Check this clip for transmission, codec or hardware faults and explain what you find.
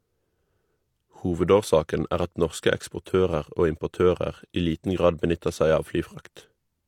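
One fault runs through the whole clip: low-bitrate audio saved at a high bitrate. The speech was likely squeezed by a low-rate codec first, which fits HE-AAC at around 40 kbit/s, then re-encoded as MP3 at a generous rate. The earlier coding damage survives intact, and unlike a simple low-bitrate encode, the roomy second file adds almost no fresh artefacts of its own.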